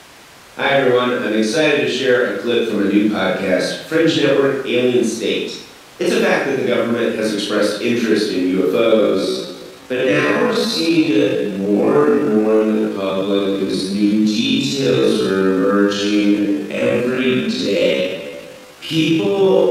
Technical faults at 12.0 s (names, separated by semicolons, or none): time-stretched section